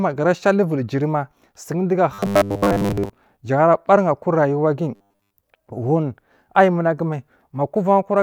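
Robotic sound from repeated short buffers hits at 2.14 to 3.10 s, after "aluvirijiri ma sun dugu", and at 4.95 to 5.37 s, after "bari un aku rayuwaguyi". A rigid 100 Hz metallic buzz, likely a 10 ms chunk looping while most real audio is skipped, still roughly tracks the speech rather than falling silent like a dropout.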